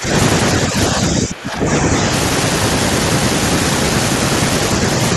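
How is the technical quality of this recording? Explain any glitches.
The speech drops in level three times in the first two seconds. From 0.00 to 0.11 s it falls by around 10 dB, from 0.66 to 0.77 s by a milder 5 dB or so, and from 0.93 to 1.94 s it sinks for about a second, bottoming out near 15 dB down. The pattern points to speech suppressed in double talk, likely from an echo canceller that could not tell this talker from loudspeaker echo while both sides spoke, and so attenuated the near-end voice along with the echo.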